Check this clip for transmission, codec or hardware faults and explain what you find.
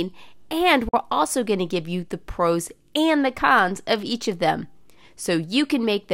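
One fault is audible, a short break in the speech early in the clip.

From 0.89 to 0.94 s the sound cuts out to silence, just before "also going to give". This is likely a Bluetooth dropout: audio packets missed their delivery window to the headphones and were discarded, so the output fell silent until valid packets arrived. About 43 ms of audio is missing, which fits two lost packets. Speech then resumes further along, as though it had kept playing through the hole.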